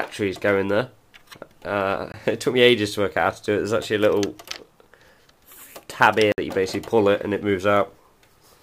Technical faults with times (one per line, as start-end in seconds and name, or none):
2.12-2.14 block of digital silence
6.32-6.38 block of digital silence